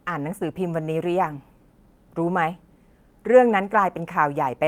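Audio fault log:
1.23–1.33 s, lost packet rebuilt from error correction: the speech stays continuous but turns briefly rough and grainy. Lost packets were replaced by the low-bitrate copies carried in the next packets, which fits about 60 ms of rebuilt audio. On a spectrogram there is no gap, only noisier, smeared harmonics.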